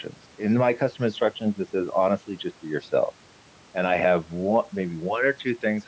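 No technical faults can be heard in the speech, and the lowest bass is trimmed by the call's microphone processing as expected.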